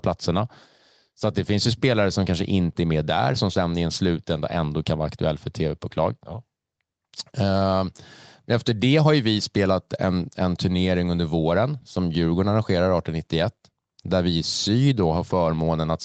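No technical faults are audible.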